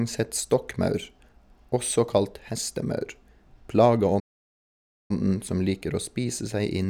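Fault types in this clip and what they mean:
Playback stall: at 4.19 s the speech cuts out in mid-flow and the output falls completely silent for about 0.9 s, resuming at 5.11 s. The break sounds like a dead pause rather than a fade. The likely cause is the player running short of incoming data, or its audio thread being held up, so it had nothing to send to the output until it caught up and carried on.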